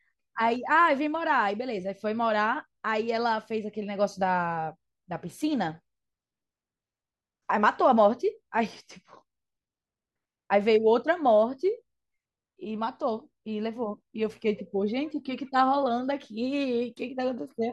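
No technical faults are audible anywhere in the speech.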